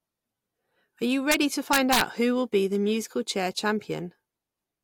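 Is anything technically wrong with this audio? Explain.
Yes. Two bursts of integer overflow break up the speech: a brief one from 1.32 to 1.34 s, and a longer one from 1.73 to 2.01 s. Both sound like harsh, violent cracks on the loudest moments, far sharper than ordinary clipping. The signal there was driven about 2 dB past the largest value the integer format can hold. Instead of being held at the limit, each overshooting peak wrapped around to the opposite extreme, flipping across the full range.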